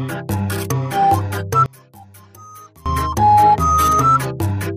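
From 1.66 s to 2.86 s the sound drops by about 25 dB and turns faint and distant, then returns to full level. The likely cause is one channel inverted: with one stereo channel's polarity reversed, the material common to both channels cancels when they are summed to mono. Centred content and low end largely disappear, leaving only the difference between the channels, which is heard here as a faint residue.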